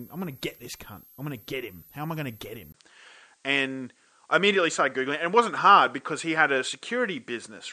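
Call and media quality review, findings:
Switching supply whistle, throughout the clip: steady high tone wandering between about 11.9 and 13.2 kHz, roughly 25 dB under the speech. Probable component is a switching regulator in the capture chain running in audible burst mode, its switching frequency shifting with load.

Input switched to a poorer device, 2.72 s to end, right after "I going to get": 20 ms dropout, then band cut off above 9 kHz, level shifts by a few dB, new faint background noise. Likely an OS or app input change to a narrower-band microphone or headset profile.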